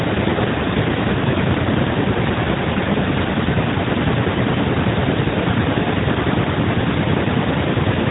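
No technical faults can be heard in this speech. It has passed through an AMR narrowband mobile codec, so nothing reaches above about 3.8 kHz, and the light coding texture fits the 12.2 kbps mode.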